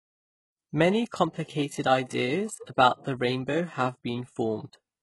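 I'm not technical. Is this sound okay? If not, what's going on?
No. The recording was likely squeezed hard by HE-AAC compression, which keeps only the lower part of the speech and rebuilds the treble as a copy. Nothing survives above about 11.5 kHz, and s sounds come out gritty, metallic or lispy throughout. The gentle fade-in ending at 0.6 s is deliberate.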